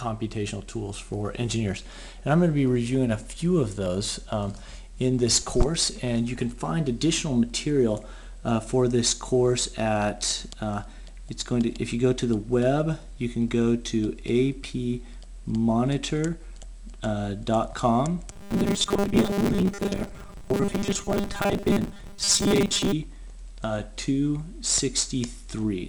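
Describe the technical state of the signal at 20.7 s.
At 20.7 s the audio has robotic sound from repeated short buffers, running 18.32 to 22.93 s. A fixed 200 Hz metallic buzz likely comes from a 5 ms buffer being replayed for most of the span. Unlike gaps or dropouts, it is never silent.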